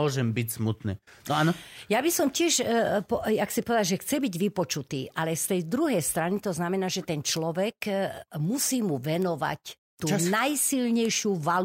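Bit error spikes at 7.37, 9.22 and 11.05 s: flipped bits throw single or few-sample values to about -16 dBFS, producing sharp broadband ticks unrelated to the speech.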